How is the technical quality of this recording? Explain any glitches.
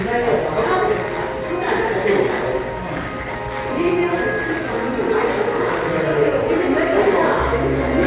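The technical quality of this recording holds up, with no glitches to explain.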